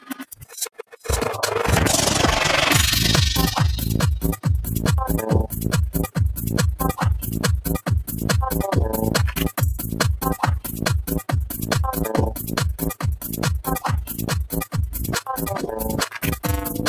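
Overlap-add ripple runs through the whole clip. The frames were recombined with an overlap that does not sum to constant gain, so the level dips and recovers once per frame, about 11 dB deep at roughly 20 times a second. The result is a fast, rough flutter.

A noise suppressor applied to music or sounds is also active from start to finish. Tuned for speech, it treats steady tones, ambience and decays as noise, so sustained material is pushed down by around ten decibels while onsets pass. The sound pumps and thins.

There are seven separate spots of sound cut by the noise suppressor. From 0.0 to 1.07 s it pulls the sound down by up to about 18 dB. Shorter dips follow at 10.6–10.82 s (about 12 dB), 11.47–11.67 s (about 8 dB), 12.35–12.51 s (about 7 dB), 12.94–13.4 s (about 17 dB), 14.02–14.27 s (about 9 dB) and 14.44–14.98 s (about 17 dB). In each, the held or fading sound sinks or has its tail cut short.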